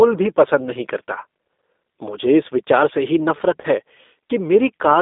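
Throughout the speech, the G.729 codec damage is plainly audible. The band is held to roughly 250 Hz to 3.7 kHz, so sibilants are dull and there is no air above the cut-off. The voice is rebuilt from a vocal tract filter, a pitch predictor and a few pulses per subframe rather than from the waveform itself, which gives it a slightly rough, synthetic texture. That character fits an 8 kbit/s G.729A encoder.

From 3.62 s to 3.67 s there is VoIP packet loss concealed by the speech codec. About 20 ms of audio is missing, which points to a single lost packet. The decoder fills the hole by extending the previous pitch and filter state at falling gain, so the sound is briefly stretched into a buzzy tone or a coloured noise that fades. Because each frame depends on the one before, the voice stays weak or distorted for tens of milliseconds or more after about 3.67 s.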